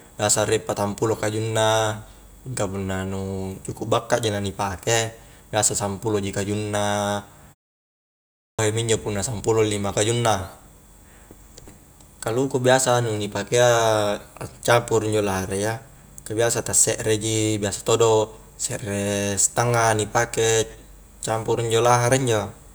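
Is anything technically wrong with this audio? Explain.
Yes, there's a clipped start after a pause at 8.43 s. After nearly a second of silence, the speech comes back abruptly and its first 0.16 s or so is missing, running to about 8.59 s. The output path seems to drop into a sleep state during the quiet stretch and needs a moment to wake up and lock again, so the opening sounds get swallowed and the speech jumps in mid-onset.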